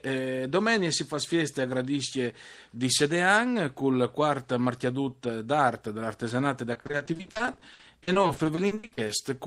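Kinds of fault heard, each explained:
Repeated packet loss (robotic sound): from 6.73 to 9.21 s, many short gaps, up to 60 ms, are patched by repeating sound. About a third sounds choppy and robotic.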